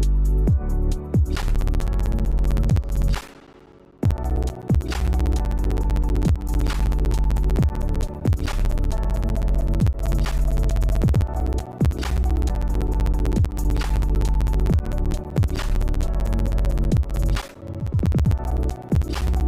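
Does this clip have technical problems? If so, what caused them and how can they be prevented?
Yes. From 1.36 s to 19.41 s there are periodic USB or driver dropouts: a gap of silence, around 10 ms long, every 64 ms, so roughly 15 to 16 ticks per second and several hundred in total. A background task stalls the USB bus or audio driver on a fixed schedule, and each stall loses a slice of audio. Unlike random network glitches or clipping crackle, these ticks are metronomically even and sound only while there is signal. Prevent them by updating the driver, enlarging the buffer, and disabling USB power-saving or polling tasks.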